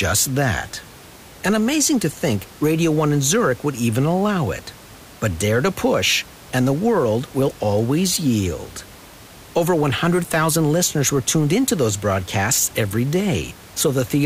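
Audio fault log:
There is no fault to log in this speech recording.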